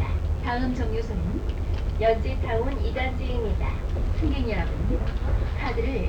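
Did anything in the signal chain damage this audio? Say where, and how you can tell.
Yes. A DECT cordless phone buzz runs through the whole clip, picked up in the analogue stage: a nearby handset's radio bursts, every 10 ms, get rectified in the wiring or input circuit. It sits roughly 35 dB under the audio, a thin 100 Hz rasp; a spectrogram shows evenly spaced harmonic lines every 100 Hz.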